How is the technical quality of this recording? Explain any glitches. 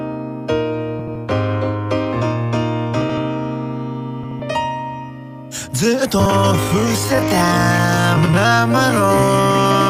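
The recording has two kinds of glitch: repeated frames-out-of-order disturbances and a time-stretched section covering the final stretch of the clip.

Frames out of order occur at 0.99, 3.01, 4.23, 6.20 and 8.17 s, each lasting about 0.13 to 0.18 s. Two adjacent blocks of about 80 ms (60 ms at 6.20 s) were decoded in swapped order, which fits runs of four or three 20 ms frames. The result is a brief garbled flutter with no time lost.

The time-stretched section runs from 6.54 s to the end, playing at 0.518 times the original speed, roughly half pace. This was likely caused by software lengthening the audio to fit a duration while preserving pitch by repeating short pieces. The pace drops abruptly and drags, but the pitch stays unchanged.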